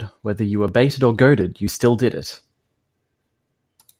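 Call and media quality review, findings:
No audible signal-path problems in the speech clip; level, continuity and timing hold steady throughout, with nothing in the audio pointing to a fault in capture, transport or playback.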